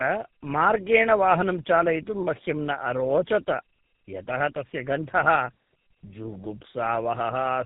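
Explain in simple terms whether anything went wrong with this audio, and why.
Tandem speech coding affects the whole clip. The speech passed through two phone-style speech coders in a row, so it sounds rough, muffled and warbly, with nothing above 3.8 kHz.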